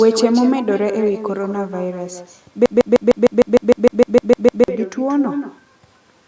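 From the first moment to the end, every phrase is trailed by a fainter, thinner double arriving about a fifth of a second later and sitting about 8 dB below the direct speech. This is echo with no canceller: the far end is playing the call through a loudspeaker, its microphone is catching that playback, and nothing strips it out, so the talker's own voice returns after the network round trip.

From 2.66 s to 4.68 s the speech sticks in a broken-record loop. A fragment roughly 0.15 s long plays 13 times back to back, giving a rapid stutter instead of forward progress, and whatever should have been heard in those two seconds never arrives. The likely cause is a stalled player, encoder or stream that kept resending the last piece of audio it held until the flow resumed.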